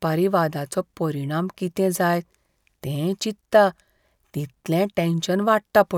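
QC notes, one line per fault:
No faults heard in this speech clip.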